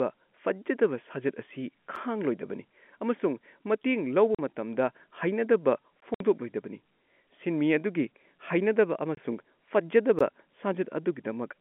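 Blocks of digital silence break up this telephone-band speech recording at 1.96 s, 6.00 s, 9.15–9.17 s and 10.19 s, lasting about 6, 17, 23 and 16 ms. In each, the output dropped straight to silence and came back with no fade. The shortest is heard as a tick and the longer ones as tiny holes. The 23 ms gap fits one unfilled 1024-sample buffer, which points to the playback program missing its deadline. Packet loss filled with silence opens longer holes at 4.35–4.39 s (40 ms) and 6.14–6.20 s (60 ms). Both lengths are multiples of 20 ms, which suggests two and three 20 ms packets went missing and the receiver played nothing in their place. The cuts are hard-edged, and they sit inside the narrow 200 Hz to 3.4 kHz G.711 telephone band, which carries no content above it.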